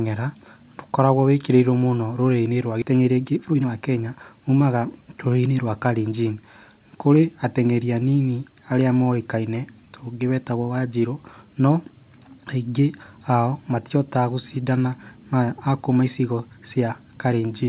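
At 2.82 s there is a skip ahead. About a second and a half of speech never plays. The sound on either side is joined almost directly, with no gap and no fill. A chunk of audio was dropped while later audio was already queued.

From 2.92 to 4.75 s comes a jitter buffer speed-up. The speech runs at 118% speed but keeps its pitch. It sounds hurried. The buffer was holding too much audio, so it cut many tiny pitch-period pieces, roughly a third of a second in total.

The narrow G.711 A-law sound, with nothing above 4 kHz, runs through the whole clip.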